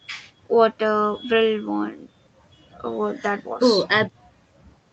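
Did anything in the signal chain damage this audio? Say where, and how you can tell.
No, the signal chain did no damage: the speech carries the ordinary marks of a call path, with nothing above 8 kHz after the microphone processing and the usual coding texture of an Opus stream at about 40 kbps.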